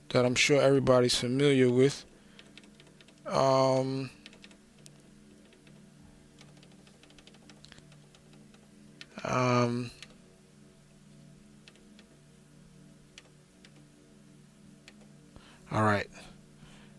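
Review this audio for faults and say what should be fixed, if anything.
Nothing in this audio needs fixing. No faults can be heard at any point in the recording, so there is nothing to prevent.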